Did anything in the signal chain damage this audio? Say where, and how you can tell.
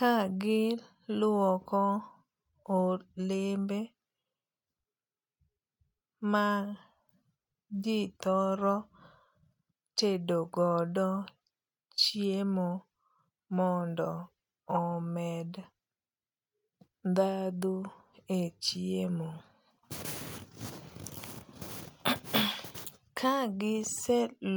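No, nothing along the chain seems to have damaged this one; it's a speech recording with nothing anywhere in it that points back to a broken stage.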